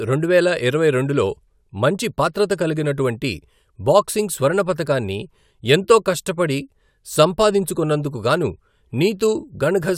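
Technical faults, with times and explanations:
No technical faults can be heard in this recording.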